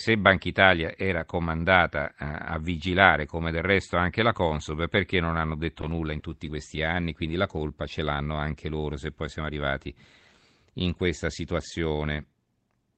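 Just after "perché non hanno detto", from 5.82 to 7.84 s, eleven lost packets are each rebuilt from error correction. Each is a 20 ms frame briefly roughened and noisier, with no gap, because the decoder played a low-bitrate copy. At about 6.2 s a short concealed packet loss fills a 20 ms hole by extending the preceding sound. It sounds like a smear or wobble rather than graininess, since no copy arrived, before "ce l'hanno anche loro".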